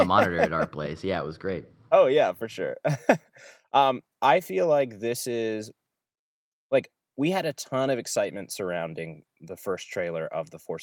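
No audible faults in the speech recording: level, continuity and tonal balance hold steady throughout.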